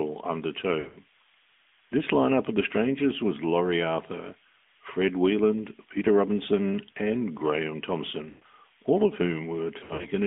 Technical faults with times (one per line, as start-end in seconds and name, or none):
0.00-10.27 switching supply whistle
0.00-10.27 AMR narrowband mobile codec
0.80-0.98 lost AMR speech frames
8.30-8.44 lost AMR speech frames
9.80-10.09 lost AMR speech frames